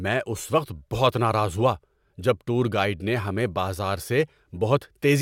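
No technical faults are audible.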